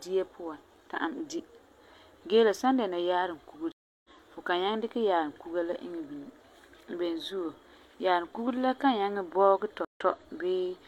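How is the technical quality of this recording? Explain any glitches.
Two stream reconnect glitches interrupt the speech. At 3.72–4.10 s, after "la san dɛna yaarum", the broken connection leaves 324 ms of silence, a flat gap in the waveform and a blank column on the spectrogram. A restarted decoder then resumes roughly 0.4 s later at "fu kan nyaŋɛ dikɛ", so audio is skipped. At 9.85–10.01 s a 114 ms gap likewise jumps ahead about 0.1 s.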